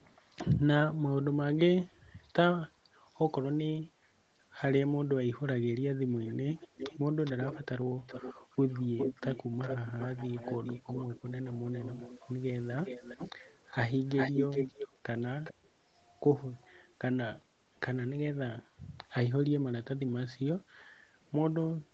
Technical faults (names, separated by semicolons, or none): echo leak